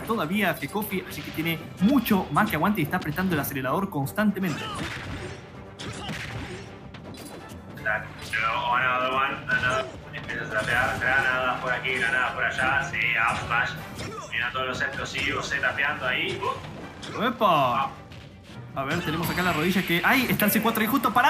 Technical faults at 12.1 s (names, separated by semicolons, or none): none